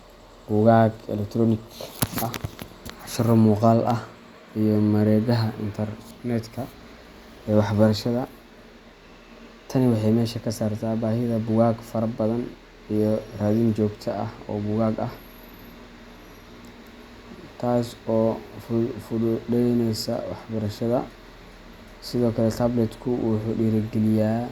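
Listening to the speech recording, nothing stood out as a technical fault at any point.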